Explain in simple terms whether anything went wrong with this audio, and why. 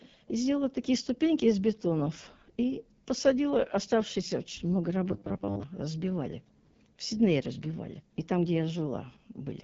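Yes, two things went wrong. The whole clip was squeezed by the AMR wideband (HD Voice) codec, the phone system used for HD calls. Here it ran at one of its lowest settings. The codec rebuilds speech from a simple model of the mouth and throat. At this low setting that rebuild is coarse, so the speech sounds rough and raspy throughout. The highest sounds are also gone. Nothing is left above about 7.5 kHz, so the sound lacks some crispness.

From 5.08 to 5.63 s the speech turns into a stiff, metallic buzz. It sounds robotic, though it still roughly follows the speech. This is robotic sound from repeated short buffers. The likely cause is new audio arriving too slowly. The player filled the gaps by replaying a tiny slice over and over, and most of the real audio in that half-second was skipped. The buzz sits at 100 Hz, which fits a repeated slice about 10 ms long.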